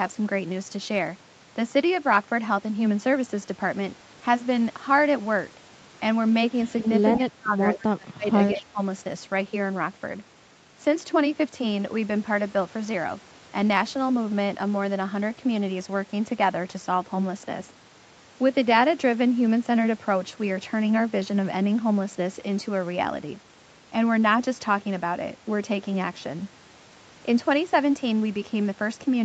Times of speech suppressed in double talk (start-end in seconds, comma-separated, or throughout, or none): 7.16-8.27, 8.54-8.80